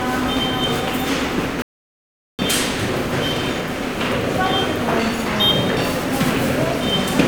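A playback stall runs from 1.62 to 2.39 s: the sound cuts out mid-flow and stays silent for about 0.77 s before it picks up again. The gap is dead silence rather than a fade or a glitchy repeat, which points to the output running dry. The likely cause is that the player's buffer emptied, or its audio thread was held up, so nothing reached the output until data flowed again.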